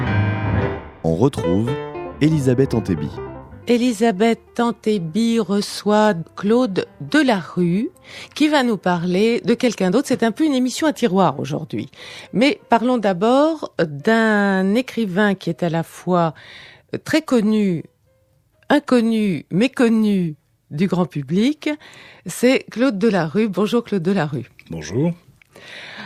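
No technical faults are audible.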